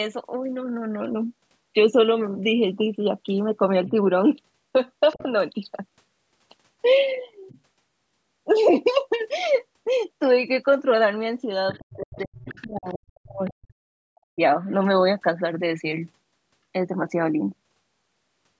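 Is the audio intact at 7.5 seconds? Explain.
No. From 7.48 to 7.6 s there is a faint scrap of another voice, roughly 30 dB below the talker: the other side's voice leaking through, likely because the echo canceller missed loudspeaker playback.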